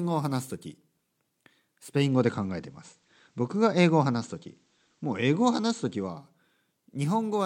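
Digital radio blending to analogue runs from 1.76 s to 6.41 s in this speech recording. The hybrid receiver lost its digital stream and cross-faded over about 374 ms to the station's FM broadcast, then faded back. While on FM, the level shifts by about 2 dB, and a faint hiss sits roughly 45 dB below the speech.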